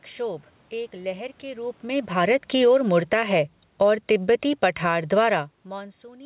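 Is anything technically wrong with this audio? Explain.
Yes. From 1.84 s to 5.14 s there is an automatic gain falling fault. The automatic gain control judged the input too loud, or its background noise too strong for its gain, and pulled its gain down gradually by about 10 dB over those 3.3 seconds. The speech sinks steadily in level, and the room noise sinks with it, which shows the change is in the gain stage rather than at the source. The whole clip is band-limited to 4 kHz, which fits a G.711 A-law call path.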